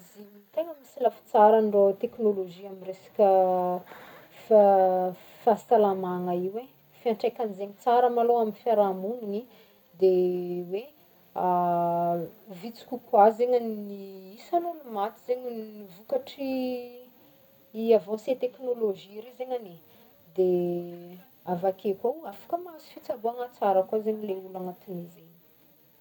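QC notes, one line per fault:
No audible faults found in the speech on this pass; nothing to log.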